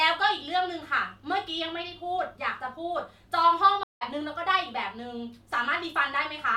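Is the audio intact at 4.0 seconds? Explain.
No. A stream reconnect runs from 3.83 to 4.03 s: the connection dropped, leaving about 177 ms of silence, then a fresh decoder picked up mid-stream and faded in. Unlike a simple dropout, the speech resumes roughly 0.2 s further on, skipping material.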